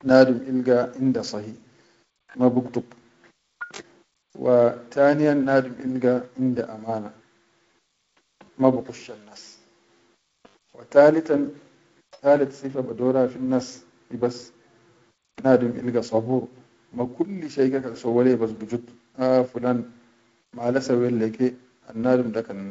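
No faults are present in the speech, which comes over G.722 wideband telephone coding at 48 kbit/s with the light hiss and slightly grainier lower band that rate brings, and no content above 7.8 kHz.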